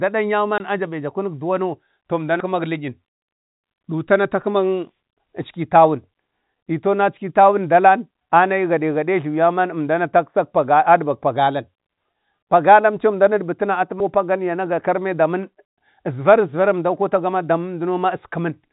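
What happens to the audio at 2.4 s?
At 2.40 s about a fifth of a second of speech vanishes, with the two sides butted together: audio missing between chunks, likely from a recorder dropping material at a 6-second chunk boundary. The waveform shows an abrupt seam, and the spectrogram shows a hard vertical discontinuity.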